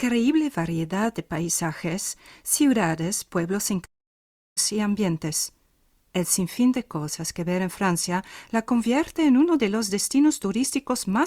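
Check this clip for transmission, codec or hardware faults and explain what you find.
One fault stands out. From 3.85 to 4.60 s there is a long network dropout. The sound smears into a fading buzz, then near-silence, and resumes with roughly 0.7 s likely lost in transmission.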